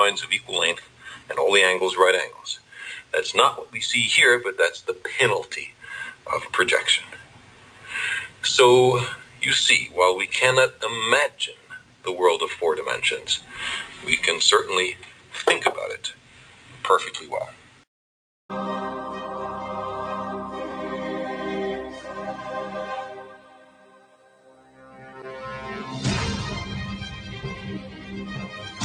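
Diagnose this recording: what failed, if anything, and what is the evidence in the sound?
A speech-oriented noise suppressor was left active on non-speech material, which places the failure in the call-processing stage. Throughout the clip the level swings by around 10 dB as the suppressor's gain moves. Onsets pass largely intact, while held and decaying parts are pulled down, so the sound pumps and thins. The processor is classifying steady energy, ambience and reverberant tails as background noise and attenuating them.

The sound cut by the noise suppressor is clearest at 0.41–1.31 s, 2.32–3.74 s, 5.7–12.06 s, 13.4–17.84 s, 23.16–25.42 s and 27.8–28.81 s. In the first five spans the drop reaches about 10 dB, and in the last about 5 dB. Only part of each span is attenuated, from around half a second up to roughly two seconds. There, sustained content sinks and tails end early.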